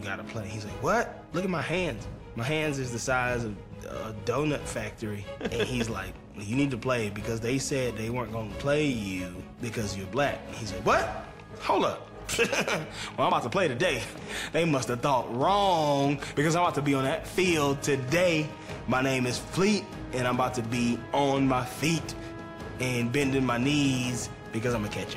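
Nothing stood out as a technical fault on listening to the clip.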